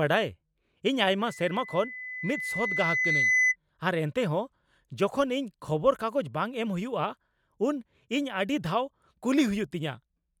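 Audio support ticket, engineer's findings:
Rising pure tone near 2 kHz from 1.27 s to 3.56 s, swelling over roughly two seconds to a squeal about 5 dB above the speech. Loudspeaker feedback squeal: mic re-capturing its own PA output, loop gain above unity at 2 kHz, growing until the amplifier limits it or the loop breaks.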